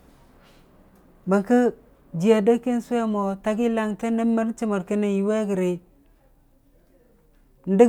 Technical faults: none

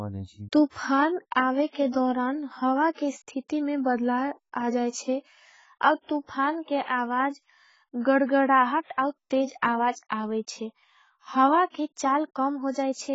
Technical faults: AAC compression

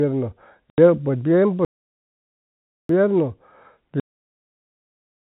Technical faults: packet loss filled with silence; playback stall; cut-off end

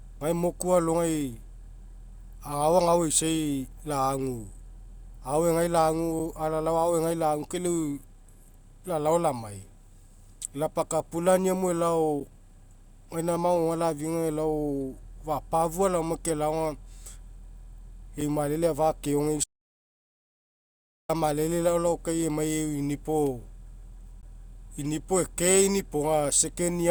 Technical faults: gap between stream segments; audio dropout to silence

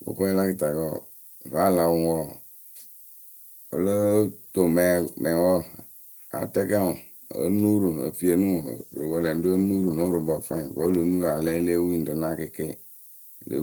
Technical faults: low bit depth with noise shaping; call bitrate drop

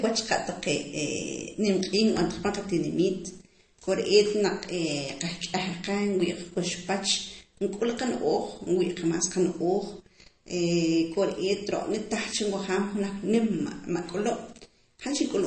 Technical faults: MP3 compression

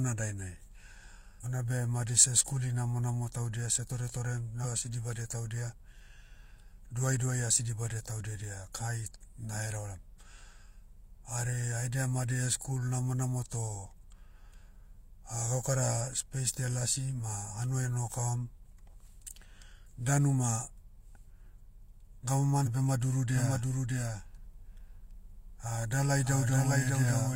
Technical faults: compressed frames skipped; doubled audio track

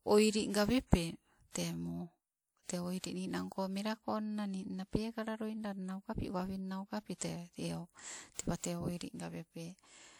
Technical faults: pre-echo

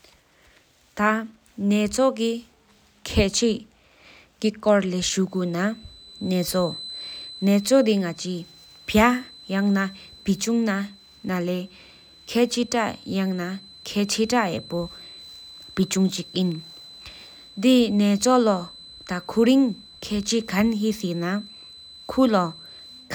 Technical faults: feedback whistle

